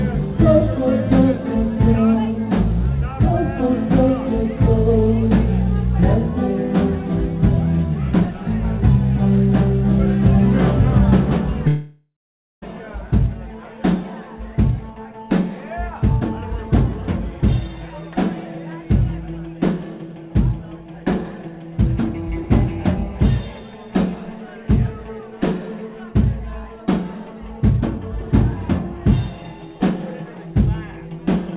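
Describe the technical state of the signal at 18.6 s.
At 18.6 s the signal is intact, with no dropout, glitch or distortion, only the narrowband call path's cut-off at 4 kHz, which fits a telephone-grade codec such as G.711.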